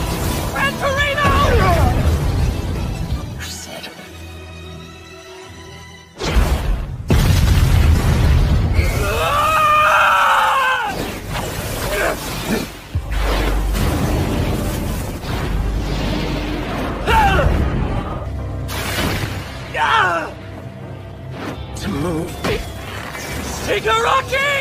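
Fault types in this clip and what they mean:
No faults detected; signal path checks out with nothing to report.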